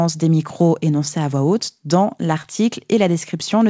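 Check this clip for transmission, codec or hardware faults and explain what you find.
One transmission fault is audible in this speech, which was carried over a call link with nothing above 8 kHz, fitting G.722 at 64 kbps.

Short concealed packet loss, 2.42 to 2.46 s: about 20 ms of audio reached the decoder too late, so the receiver stretched the preceding sound across the gap and then blended back into the real signal. The result is a brief smear or wobble.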